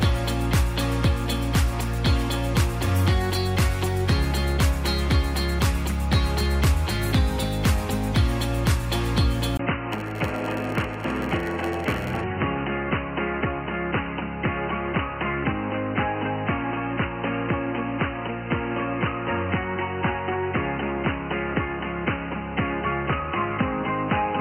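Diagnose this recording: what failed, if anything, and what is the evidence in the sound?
At 9.57 s the sound drops out for about 20 ms, then returns dull and band-limited, roughly 5 dB quieter, and over a new noise floor around 45 dB below the signal. This change persists to the end. At the driver or device-routing stage, the likely cause is an input switched to a poorer device, such as a headset's narrowband call profile, which brings its own bandwidth, gain and noise.

From 9.91 to 12.24 s a steady 100 Hz buzz rides on the audio, and the sound runs slow at 0.919 times speed while keeping its timbre. This is a block size mismatch (padded) at the buffer stage. The writing stage delivers blocks about 92% the length the reader expects, and the shortfall is filled with zeros. The reader runs at 100 blocks per second, so each silent gap recurs every 10 ms, producing the buzz and stretching the timing.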